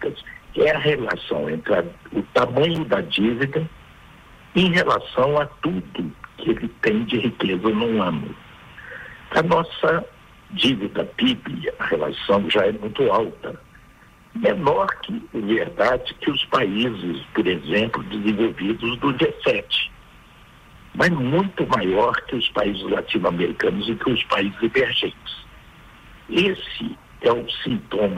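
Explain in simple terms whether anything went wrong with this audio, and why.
Chunks out of order: twice, at 2.75 to 2.78 s and 26.56 to 26.60 s, a tiny slice of sound about 12 ms long arrives late and plays in the wrong place, causing a brief jumbled blip. Unlike a dropout, nothing goes missing. The pieces are just shuffled.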